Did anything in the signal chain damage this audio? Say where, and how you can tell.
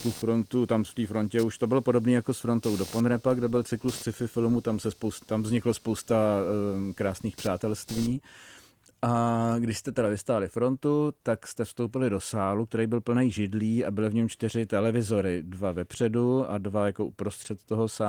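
Yes, in the analogue wiring: computer activity noise, a buzz pulsing around 200 Hz about 20 dB below the speech from 0 to 8.1 s, from shifting shared ground rather than steady mains hum.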